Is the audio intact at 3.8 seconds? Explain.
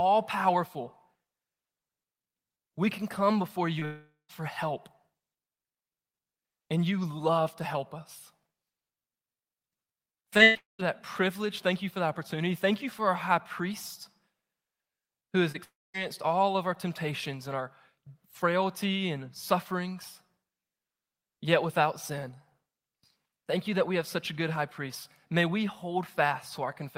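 No. From 3.79 to 3.83 s there is short concealed packet loss: about 20 ms of the speech arrived too late for the decoder, which patched the gap by extending the preceding sound and blending back in. It comes through as a brief smear or wobble.

Right after, from 3.85 to 4.31 s, comes what is likely a long network dropout. Roughly 440 ms never arrived, so the receiver carried the last sound forward as a fading buzz or hiss and then left about 140 ms of silence. The speech resumes at "for help", with that stretch lost.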